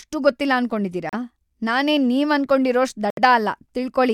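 This speech clip has two brief dropouts to silence, about 35 ms at 1.09 s just after "ಗೊತ್ತಿಲ್ಲ ಅನ್ಕೊಂಡಿದೀರ" and 70 ms at 3.10 s. Each is likely a Bluetooth stall, where the headphone buffer briefly ran dry.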